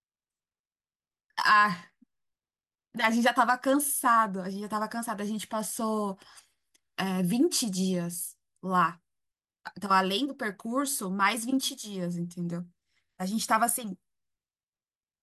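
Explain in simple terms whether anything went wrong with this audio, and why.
Nothing went wrong here; the recording has no faults.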